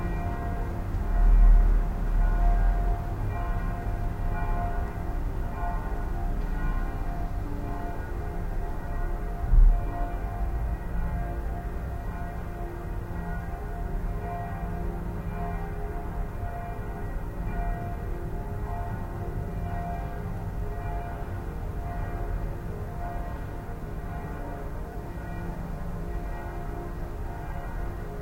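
At 24.93 to 24.95 s, lost LE Audio frames leave a brief noisy smear. The decoder refilled the gap, which fits two lost 10 ms frames, with randomised spectrum.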